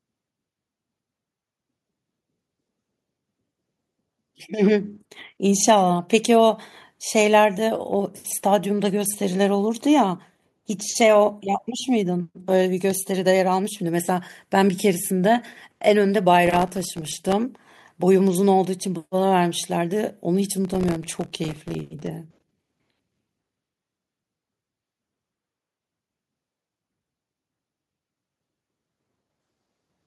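At 16.46 to 17.33 s and again at 20.65 to 22.07 s, processor overload crackle tears through the speech: dozens of missed short buffers, each dropped to silence. On a waveform these show as tiny hard-edged gaps; a spectrogram shows dense vertical broadband streaks.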